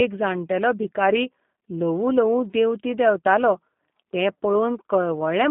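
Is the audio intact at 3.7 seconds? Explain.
No, at 3.7 s the speech is still going through the G.729 codec that runs the whole clip. At 8 kbit/s it is rebuilt from a vocal tract filter, pitch prediction and a few pulses per frame, so it sounds rough and synthetic, squeezed into 150 Hz to 3.6 kHz with nothing above 3.8 kHz.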